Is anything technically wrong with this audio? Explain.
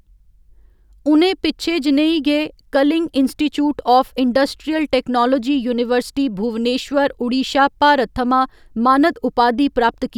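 No, the speech signal shows no audible technical faults at any point.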